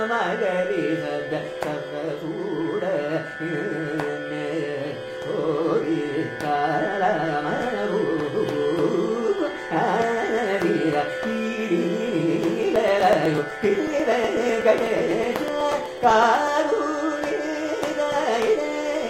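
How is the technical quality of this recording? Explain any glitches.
The recording has one clear defect: periodic USB or driver dropouts between 12.63 and 16.48 s. About thirty short gaps recur every 0.124 s, each dropping roughly a millisecond of audio. They are skipped rather than filled with silence, so the sound jumps forward slightly at each one. A background task stalling the USB bus or audio driver at a fixed interval would produce this. The result is a steady train of small ticks, about eight per second, audible over the sound in that stretch.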